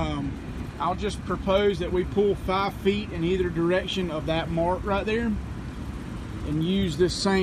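Nothing is technically wrong with it.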